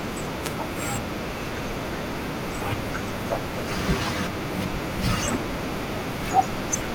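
At 0.41 s a wireless microphone noise hit lasts about 0.15 s, ending at 0.56 s. The FM radio link faded as reflected signals cancelled at the receiver, letting receiver noise rise through the speech as a brief swish of static.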